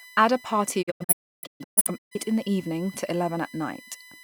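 A USB whine runs under the speech from start to end: a fixed 1 kHz tone, strongest at its 2 kHz harmonic, sitting roughly 25 dB below the speech. The bus's 1 ms frame activity leaks into the audio through shared power or ground.

From 0.81 s to 2.16 s a digital broadcast dropout breaks the speech into short holes as the receiver mutes on bad or missing frames. About 0.9 s of audio is lost, the longest gap near 0.3 s, each edge fading in 20 ms.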